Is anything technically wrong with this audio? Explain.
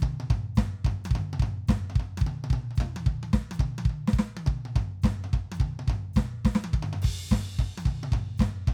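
No, nothing technically wrong can be heard in this music clip. It carries on without any audible interruption or defect.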